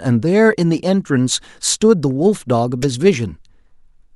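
At 2.82 to 2.86 s there's a corrupt frame decoded: a single compressed frame got some of its bits flipped, and the decoder went ahead and played it anyway. The garbled gains and codes throw energy into the wrong parts of the spectrum for just that frame's length, roughly 30 ms, so you hear a short, sharp glitch punching through the speech, peaking fairly hot at around -10 dBFS.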